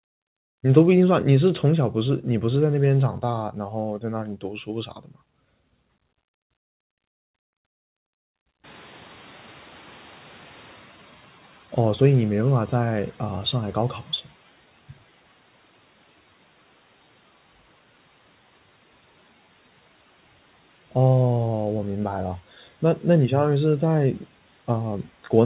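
Between 4.24 and 4.69 s, and again from 4.86 to 5.16 s, the noise suppressor misjudged parts of the speech as background and pulled them down by up to about 12 dB. This is speech cut by the noise suppressor. Only a fraction of each span is affected, roughly a fifth of a second in the first and a bit less in the second. Those stretches sound swallowed or faint.

At about 8.5 s the room noise jumps by about 25 dB. From 8.63 to 14.13 s the noise suppressor is catching up: its noise estimate still reflects the quieter room, so it lets the new noise through with too little reduction and needs 5.5 s to settle into a cut of about 9 dB. The noise comes through with less reduction at first and then gradually recedes. Nothing reaches above 4 kHz, which points to a narrowband G.711 call path.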